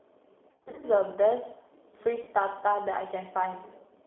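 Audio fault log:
throughout G.729 codec: the speech passes through a low-rate codec, which fits 8 kbit/s G.729A, that rebuilds it from a vocal tract model and sparse pulses within a 300 Hz to 3.5 kHz band, so it sounds plainly rough, thin and synthetic.
0.51–0.86 s and 2.22–2.31 s VoIP packet loss concealed by the speech codec: the decoder extrapolated its last pitch and filter over missing packets, scattered across the first span, so the sound smears into a fading buzz or coloured noise and stays distorted briefly afterwards.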